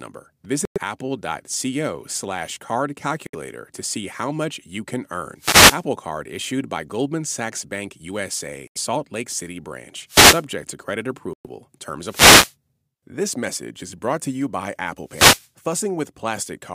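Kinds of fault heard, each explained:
Bluetooth stall: The speech drops to complete silence four times, at 0.65, 3.27, 8.67 and 11.33 s, for 68 to 114 ms each, then carries on. These gaps are most likely a wireless headphone link whose buffer emptied while interference held back packets, so playback simply waited for the retransmissions. Unlike a dropout caused by radio fading, these gaps contain no hiss or crackle, only clean silence.
Wireless microphone noise hit: Four bursts of hiss-like static, at 5.37 to 5.85 s, 10.07 to 10.45 s, 12.07 to 12.54 s and 15.05 to 15.49 s, each lasting roughly 0.4 to 0.5 s, wash over the speech. These come from an analogue FM radio microphone whose signal faded when reflected paths cancelled it, letting receiver noise rise into a swish. What separates them from a Bluetooth stall is that noise is added rather than the sound going silent.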